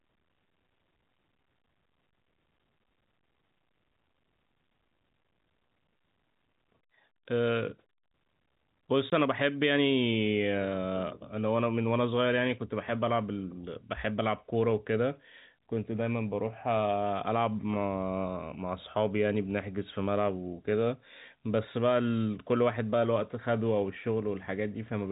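At 9.10 s the speech drops out completely for 20 ms, until 9.12 s. This is packet loss filled with silence. A chunk of the stream never arrived, and the receiver put silence in its place instead of estimating the missing sound. The gap's length fits a single lost 20 ms packet. Because the signal is cut off and then restored abruptly, the hole has hard edges. Loss concealment would sound different, smearing or repeating the preceding sound across the gap. Here the gap is a clean, dead hole. Throughout, the telephone-band G.711 coding leaves nothing above 4 kHz.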